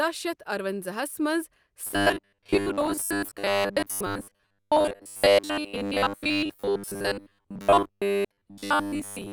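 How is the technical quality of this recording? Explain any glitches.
The recording degrades partway through. From 1.87 s to the end, the speech turns into a rigid metallic buzz at 100 Hz: robotic sound from repeated short buffers, likely from audio arriving too seldom, so roughly 10 ms segments repeat for most of the time.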